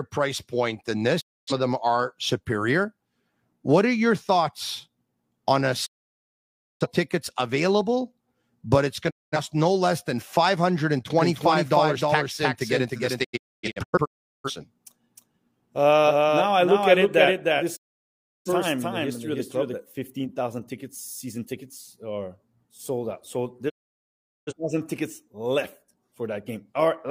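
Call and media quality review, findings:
Digital broadcast dropout: receiver losing lock or failing frame checksums and muting. Sound fades out over 20 ms to silence, then returns, at 1.20–1.52 s, 5.85–6.87 s, 9.09–9.38 s, 13.23–14.50 s (several short holes, longest 0.38 s), 17.75–18.50 s, and 23.68–24.53 s. Programme material in each gap is lost.

Doubled audio track, 11.19–19.75 s: likely a second, slower capture path or an out-of-step edit mixing the same audio in twice. A dry, full-band copy trails about 0.3 s behind, about 5 dB quieter, and cuts in and out abruptly.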